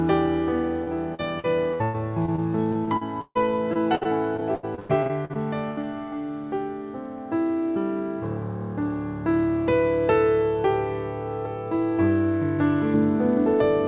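From 0.84 to 3.37 s and again from 3.73 to 5.85 s, repeated packet loss (robotic sound) chops the audio: a dozen or so holes per stretch, the longest 144 ms and 94 ms, patched by stretching the last sound. About a fifth of each span is concealed, which gives a choppy sound with pieces missing. A spectrogram shows smeared, repeated frame patterns between brief dropouts.

From 12.94 s to the end, de-emphasis applied wrongly tilts the spectrum smoothly downward, about 11 dB lower at 10 kHz than at 1 kHz. The result is dull and muffled, and the spectrogram shows the top fading gradually. The whole clip also passes through a call path limited to 4 kHz, which fits G.711 mu-law.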